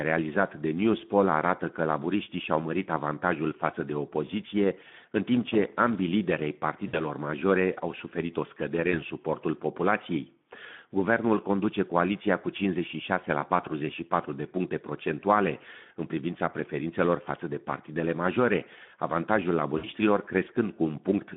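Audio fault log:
Throughout, Speex codec: the speech is confined to roughly 150 Hz to 3.5 kHz, so it sounds thin and narrowband. The damage is plainly audible as a hoarse, grainy texture. This CELP coder models the voice with a pitch predictor and a short filter, but leaves too few bits to describe the excitation accurately. The roughness points to a low-to-middle quality setting of around 11 kbps.
6.87–7.04 s, 8.91–9.02 s and 19.77–19.87 s, VoIP packet loss concealed by the speech codec: about 60 ms, 20 ms and 60 ms of audio go missing, which fits three, one and three 20 ms frames. The decoder fills each gap by repeating its last pitch and filter at falling gain, so the voice smears into a fading, stretched-out sound. Because each frame builds on the one before, the voice stays weak and distorted briefly after each gap.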